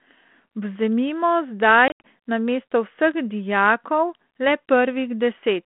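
From 1.88 to 2.01 s, packet loss on an ADPCM call cuts about 120 ms of silence into 160 ms of speech, the longest gap 80 ms. The waveform shows flat, square-edged holes. The out-of-step decoder then resumes slightly distorted, settling within some tens of milliseconds.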